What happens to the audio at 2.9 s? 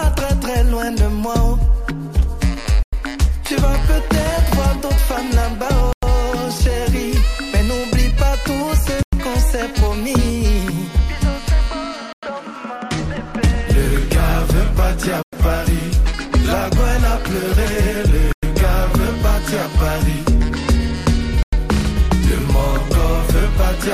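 A gap between chunks interrupts the audio from 2.83 to 2.93 s: a 100 ms hole of silence at the join after a 3 s chunk.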